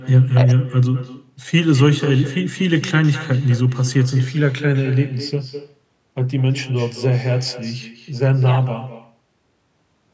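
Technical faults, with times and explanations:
Throughout, echo with no canceller: every phrase comes back about a fifth of a second later, roughly 16 dB down and thin, because the far end's loudspeaker feeds its microphone and nothing strips that loop before it returns over the network.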